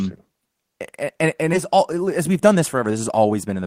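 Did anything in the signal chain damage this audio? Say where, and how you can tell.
Yes. At 1.53 to 1.55 s the speech jumps forward with no gap, and the sounds on either side join almost directly, so roughly 0.7 s of audio never plays. This is a skip ahead at the network and jitter-buffer stage. A run of audio was lost in transit or thrown away when the buffer overflowed while later audio was already queued. Playback went straight to the newer material, cutting the delay by about the same amount.

From 1.75 s to 3.63 s the speech runs about 8% fast and sounds hurried, yet its pitch stays unchanged. That is a jitter buffer speed-up, also at the buffer stage. Audio had piled up beyond the buffer's target, as when delayed packets arrive in a burst. The receiver then removed many short slices, each one or a few pitch periods long. Together they add up to around 150 ms, which shortens the stretch without shifting pitch.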